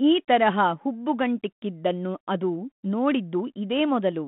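Nothing stood out on listening to this speech clip, which comes through a narrowband telephone line coded as 32 kbit/s G.726 ADPCM.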